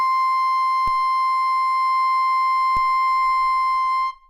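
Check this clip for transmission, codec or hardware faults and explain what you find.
Two DC steps occur in this music, at 0.88 s and 2.77 s. Each time the waveform's zero line jumps by about −21 dBFS, then bleeds away through a 5 Hz high-pass. Both are heard as a brief low thump, with the music continuing unchanged underneath.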